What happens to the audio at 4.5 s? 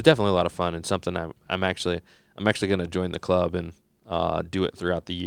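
Nothing goes wrong at 4.5 s; the audio plays through that moment intact, with no dropout, click or distortion.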